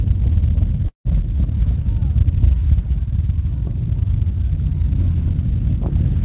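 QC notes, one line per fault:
0.88–1.07 s, call audio freeze: a brief fading buzz or hiss, then silence. Likely delayed packets emptied the jitter buffer. Playback resumes where it stopped, 170 ms late.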